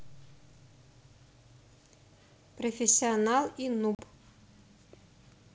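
A speech clip on a G.722 wideband call at 64 kbit/s shows packet loss on an ADPCM call, from 3.95 to 4.03 s. About 40 ms of audio, a few packets' worth, drops to a hard-edged silence. Unlike a simple dropout, the trouble continues after the hole: the receiving decoder's predictor and step size have drifted from the sender's, so the speech resumes slightly distorted before settling within tens of milliseconds.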